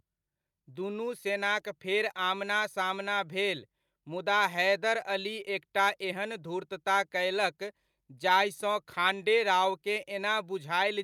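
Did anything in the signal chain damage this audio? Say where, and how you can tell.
No, no damage is audible.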